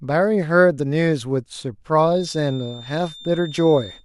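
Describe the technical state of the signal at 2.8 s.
At 2.8 s a feedback whistle is sounding: a thin, steady tone at 3.6 kHz that starts at 2.05 s and continues to the end, sitting roughly 20 dB below the speech and swelling and fading slowly in level. It is likely caused by a loudspeaker-to-microphone loop held just at the edge of feedback. On a spectrogram it appears as a narrow, unbroken horizontal line at 3.6 kHz. In the waveform it is mostly hidden under the speech.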